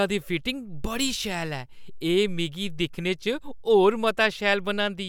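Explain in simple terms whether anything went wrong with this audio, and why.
Nothing went wrong with this audio: the speech comes through without any fault to point to.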